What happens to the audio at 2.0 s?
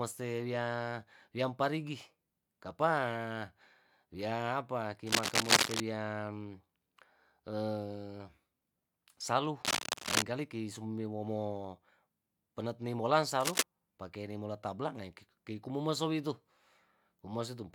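Nothing goes wrong at 2.0 s: the speech there carries on intact, with no dropout, click, distortion or other fault.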